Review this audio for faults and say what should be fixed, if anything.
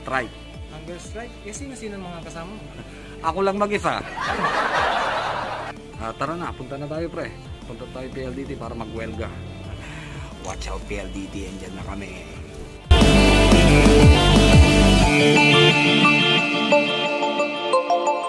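Nothing here needs fixing, as there are no audible technical defects.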